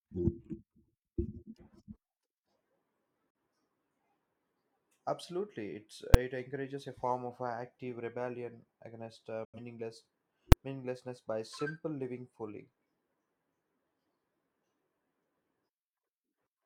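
At 3.30 s a digital broadcast dropout mutes the speech for about 43 ms, consistent with one corrupted frame, with a 3 ms fade. At 6.14 s, just before "encourages a form of", invalid numbers at full scale pin a 5 ms block to one extreme value, heard as a single loud bang. After "active rebellion against uh", a second dropout silences 9.45 to 9.59 s, which fits two lost frames. At 10.52 s, before "meaninglessness by simple living", another 5 ms full-scale block produces a second bang.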